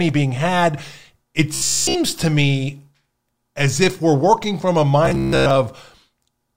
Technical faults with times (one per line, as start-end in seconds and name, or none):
1.54-1.95 robotic sound from repeated short buffers
5.06-5.56 robotic sound from repeated short buffers